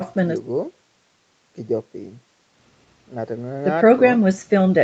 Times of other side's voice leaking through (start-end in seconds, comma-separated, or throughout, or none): none